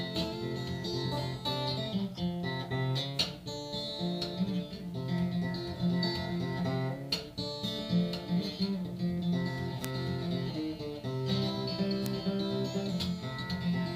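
From 2.10 to 2.20 s, a corrupt frame was decoded: damaged bits across a few consecutive compressed frames misplaced spectral energy, producing a faint chirping burst. At 9.85 s and 12.06 s, bit error spikes flip single bits in one or two samples, each jumping and snapping back as a sharp broadband tick. From 12.72 to 12.76 s, one more corrupt frame gives a brief, slightly louder blip.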